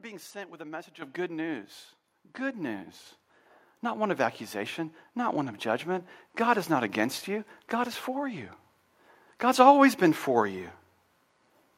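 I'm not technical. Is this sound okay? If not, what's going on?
No. The microphone volume is stepped up three times, at about 1.02, 2.04 and 3.06 s, with the first jump the biggest. The voice and the background noise get louder together, in sudden steps, so it isn't someone moving closer to the microphone.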